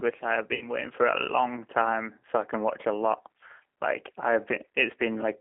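Throughout, the speech has passed through the G.729 codec at 8 kbit/s. The codec rebuilds the speech from a vocal tract filter, a pitch predictor and a few pulses rather than sending the actual waveform. The result is plainly rough and synthetic, and it is confined to a band of roughly 250 Hz to 3.6 kHz.

From 0.55 to 0.69 s, VoIP packet loss concealed by the speech codec is audible. Audio went missing, which fits six 10 ms frames, and the decoder extrapolated from its last pitch and filter with falling gain. The sound stretches into a fading buzzy tone or coloured noise and stays weakened briefly afterwards.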